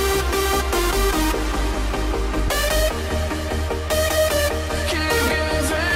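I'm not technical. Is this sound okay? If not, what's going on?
No. At 2.48 s there are compressed frames skipped. A tiny piece, about a thirtieth of a second, is missing. The sound jumps ahead at that point.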